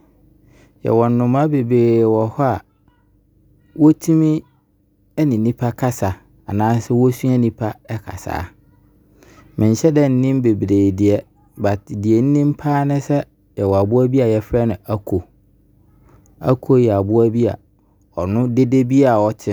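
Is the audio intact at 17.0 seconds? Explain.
Yes, at 17.0 seconds the speech plays through intact, with no audible fault at that moment.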